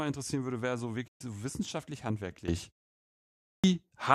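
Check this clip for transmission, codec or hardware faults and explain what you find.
Three faults affect this speech recording: a digital broadcast dropout, a sudden gain jump and a clipped start after a pause.

The digital broadcast dropout runs from 1.07 to 1.21 s. The receiver stopped getting usable frames, whether from signal loss or failed checksums, and muted until valid data resumed. The gap fits roughly five lost frames. After "interessieren würde wäre so", the speech fades out over about 8 ms into a 120 ms hole and comes back at "so wissenschaftlich". Whatever was broadcast during that hole is gone.

The sudden gain jump comes at 2.48 s, just after "so wissenschaftlich", and lasts to the end. A digital gain change was likely applied between two adjacent samples with no ramp, such as a setting or bit shift taking effect instantly. The speech and its background noise rise together by about 13 dB in one step, and the higher level holds for the rest of the recording.

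The clipped start after a pause falls at 3.15 s, following about 0.51 s of silence. The output device slept during that quiet stretch and needed time to wake and relock before it passed audio again. The first 0.49 s of the next speech, up to 3.64 s, is swallowed. The speech jumps in abruptly from silence, missing its opening sounds.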